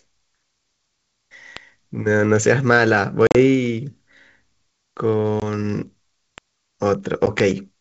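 Packet loss on an ADPCM call breaks up the speech at 3.27 to 3.36 s (about 70 ms gone in short bursts), 5.40 to 5.43 s and 7.26 to 7.28 s. Each gap goes abruptly silent, then the decoder's predictor lags, so speech returns briefly slightly distorted.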